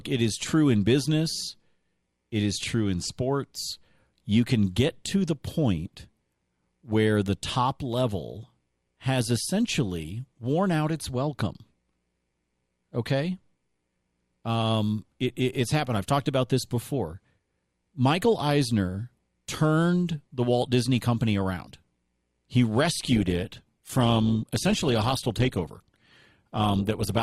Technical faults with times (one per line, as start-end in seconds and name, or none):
23.09-27.23 adaptive stream at a lower bitrate